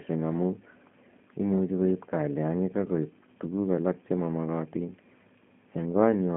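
Throughout, the speech carries plainly audible G.729 codec damage. The band runs from 150 Hz to 3.4 kHz, with nothing above 3.6 kHz. Each frame is rebuilt from a filter, pitch predictor and sparse pulses. This makes it rough and synthetic, consistent with G.729A at 8 kbit/s.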